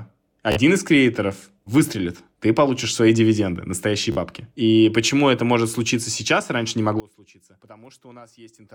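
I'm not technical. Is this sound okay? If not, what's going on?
No. Twice, the wireless link dropped a short run of audio and the receiver filled the gap by repeating its last scrap of sound. This Bluetooth stutter is heard at 0.52 s and 4.12 s as a brief buzzy hiccup lasting about 45 milliseconds, after which the speech jumps ahead.

From 7.0 s to the end, the speech suddenly becomes much quieter, as if most of it had drained away. The likely cause is one channel inverted: one side of the stereo signal is flipped, so the parts shared by both sides cancel when they are combined.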